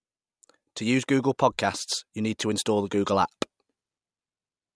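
Listening to this speech recording, nothing stood out as a technical problem.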